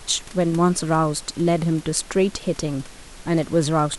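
Nothing stood out on listening to this speech clip, with only the quiet background noise of the room audible about 23 dB below the speech.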